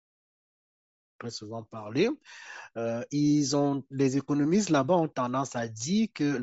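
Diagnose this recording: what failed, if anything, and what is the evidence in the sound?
The codec stage failed. Throughout the speech, the upper band sounds grainy and breathy, even under the smooth fade-in ending near 1.23 s. This is likely Bluetooth LC3 compression. The sound fits 32 kbps in 10 ms frames. The encoder zeroes high spectrum and fills it with noise.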